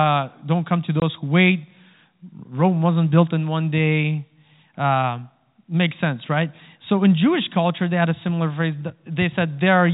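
At 1.00 s the speech drops out for 20 ms, until 1.02 s. This is packet loss filled with silence. Audio travels in small packets, and here one went missing. The receiver played nothing in its place. The gap's length fits a single lost 20 ms packet. The sound stops and restarts abruptly. The telephone band of the G.711 coding is audible throughout, capped at 4 kHz.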